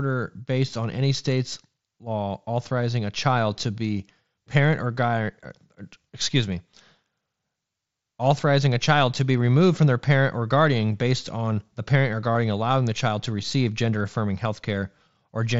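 Speech carried over a wideband Bluetooth headset link, with concealed Bluetooth headset packet loss at 0.69 s, before "on any state's law", where a single 7.5 ms loss is almost hidden, and from 12.32 to 12.35 s, between "on the parent or" and "allowing the child to", where 30 ms of repeated waveform makes a short buzz ending in a slight warble. Unlike a dropout, the gap stays at full level instead of falling silent.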